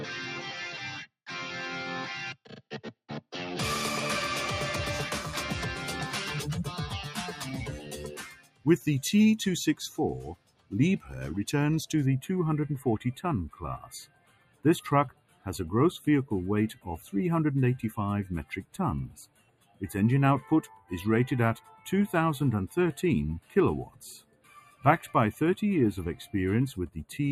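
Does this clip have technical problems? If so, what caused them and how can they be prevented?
Yes. A noise suppressor built for speech was applied to music or sounds and stays active for the whole clip. It swings the level by roughly 15 dB: attacks pass, while sustained material and decays are treated as noise and pulled down, so the sound pumps and thins. Unlike a compressor, it ducks steady content rather than peaks. Switch off speech noise suppression, or use a music mode, when the source is not speech.

The sound is cut by the noise suppressor at 2.34–3.33 s (about 12 dB), then at 7.07–8.87, 9.9–11.12, 13.49–17.11, 18.44–21.87 and 23.4–25.15 s (about 17 dB each). Held or fading sound sinks and its tail is truncated. Unlike a dropout, the sound dips rather than vanishing, and transients survive. Disabling the suppressor prevents these cuts.

Channel delay (comb filtering) runs from 12.06 s to the end. 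One channel arrives late by around a tenth of a millisecond, which fits a delay of a few samples, and summing to mono cancels shared content at regular intervals, with the first notch near 5 kHz. The sound turns hollow and phasey. Unlike a low-pass filter, the notches are evenly spaced and fixed rather than a smooth roll-off. Align the channels before any mono downmix.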